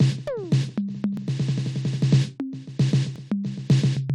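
This is a music clip with two tiny skips, at 1.17 s and 3.16 s. Each is a brief skip where the waveform jumps. Roughly 10 to 20 ms of sound goes missing each time. The cause is overlap between stream segments. Two neighbouring segments claim the same stretch of time, so the player trims the overlap and discards real audio. The skips fall about 2 s apart, which fits 2-second segments.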